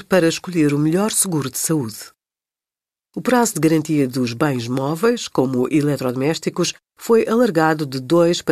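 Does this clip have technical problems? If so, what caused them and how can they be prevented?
No, nothing in this speech recording stood out as a technical problem on listening, so there is nothing here to trace to a cause or to prevent.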